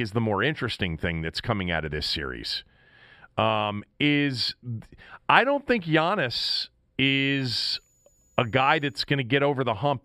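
From 7.05 to 9.05 s a switching supply whistle sits faintly under the speech, roughly 40 dB down: a high tone wandering between 6.89 and 6.93 kHz as a switching supply runs in an audible burst mode or beats with another one. On a spectrogram it appears as a thin, slightly wavering horizontal line near 6.9 kHz; the waveform shows no visible change.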